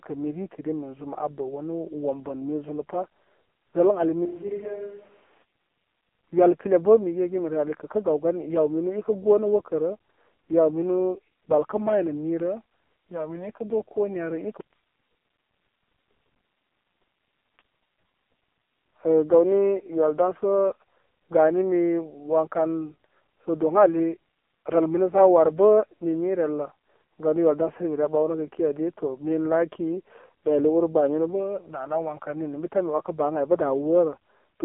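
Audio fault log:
Throughout: AMR narrowband mobile codec, heavy coding leaves speech buzzy and synthetic, fitting a low mode near 5.9 kbps; spectrogram empty above 3.8 kHz, thin below 250 Hz.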